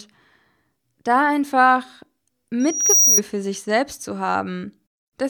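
At 2.60 s a loudspeaker feedback squeal starts: the microphone re-hears its own loudspeaker, and at 5.8 kHz the loop gain tops unity. A piercing tone swells for under half a second to about 5 dB above the speech, then stops at 3.21 s. The spectrogram shows one thin, brightening horizontal line.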